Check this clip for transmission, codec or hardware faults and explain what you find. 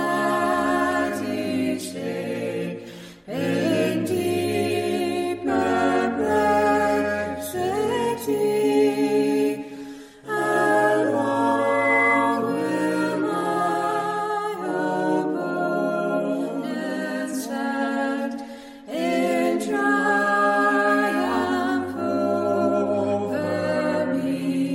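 One fault is present, a loudspeaker feedback squeal. It runs from 11.59 to 12.39 s. A microphone is picking up its own loudspeaker, and at 2 kHz the loop gain passes one. That tone swells over roughly a third of a second. It ends up a few decibels above the rest of the sound.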